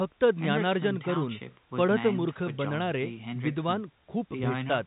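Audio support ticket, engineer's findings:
Nothing stood out on listening to this speech clip, which comes through as telephone-band audio with nothing above roughly 3.8 kHz.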